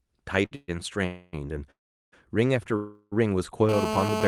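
Right at 0.45 s there's a short stall from a late packet. The jitter buffer ran dry and the receiver held the last sound for about 58 ms until the data turned up, so you hear a brief stretched, slightly buzzy smear with nothing lost.

Then come four call audio freezes, at 0.55–0.70 s, 1.06–1.35 s, 1.71–2.14 s and 2.76–3.14 s, likely from packets held up in the network. Each time the last sound carries on as a fading buzz. The 1.71 s one runs to about 413 ms, and most of it drops to silence. The speech then resumes where it stopped, so the pauses are inserted rather than missing.

From 3.69 s to the end there's GSM phone buzz: a harsh, raspy 217 Hz drone full of harmonics at about 4 dB below the speech. A nearby phone on a call is pulsing its transmitter, and the audio circuit is rectifying those bursts.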